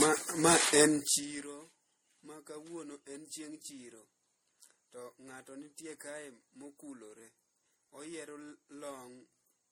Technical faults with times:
0.00-9.71 generation loss
0.94-1.48 zipper noise

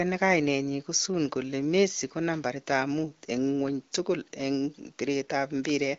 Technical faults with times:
none

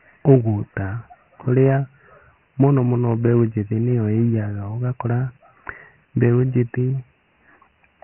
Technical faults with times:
0.00-8.04 Dialogic VOX ADPCM

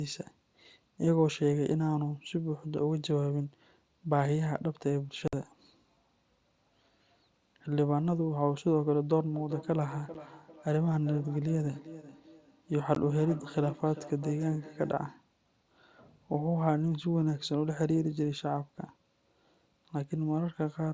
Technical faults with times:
5.28-5.33 unconcealed Bluetooth headset packet loss
9.34-15.15 feedback echo between two devices
10.14 unconcealed Bluetooth headset packet loss
12.95 unconcealed Bluetooth headset packet loss

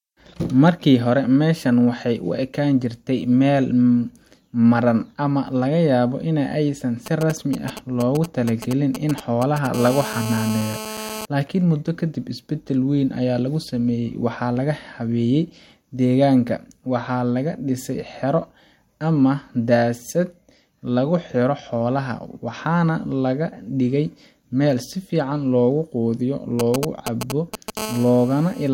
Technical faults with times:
7.06-9.67 GSM signalling bursts
9.74-11.25 GSM phone buzz
26.59-27.79 GSM signalling bursts
27.79-28.69 GSM phone buzz

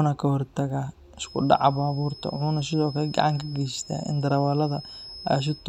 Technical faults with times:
1.14-5.69 feedback whistle

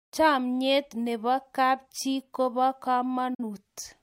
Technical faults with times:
3.34-3.44 digital broadcast dropout

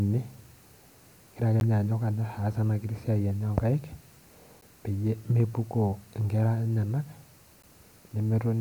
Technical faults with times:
1.60 gap between chunks
4.61 gap between chunks
7.62 gap between chunks

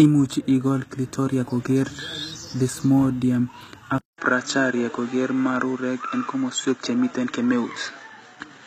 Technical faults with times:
0.00-8.67 HE-AAC compression
3.98-8.67 input switched to a poorer device

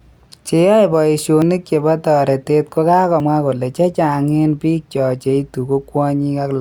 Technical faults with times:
1.42 dropped buffer (overrun)
3.20 dropped buffer (overrun)

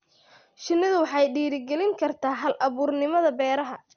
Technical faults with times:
0.00-3.96 MP2 compression

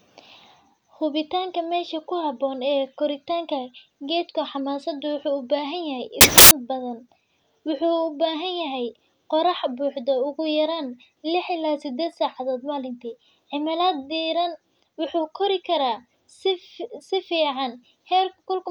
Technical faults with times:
6.21-6.51 samples built from the wrong bytes

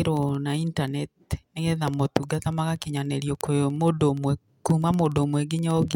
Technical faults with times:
0.11-5.94 word clock ticks

